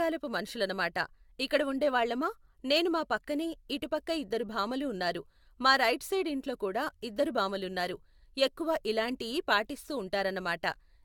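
Generation loss runs throughout the speech: a swirly, hollow smear, blurred consonant attacks, and nothing above 17 kHz. That is worse than a single AAC-LC pass near 96 kbit/s would leave, and it likely comes from repeated re-encoding, with about four passes stacking fresh artefacts.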